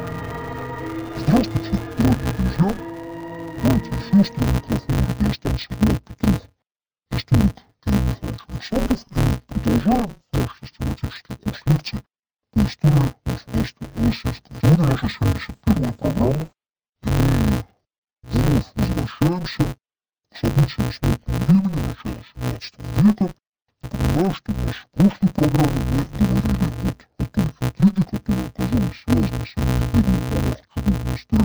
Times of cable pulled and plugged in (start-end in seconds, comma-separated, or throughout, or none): none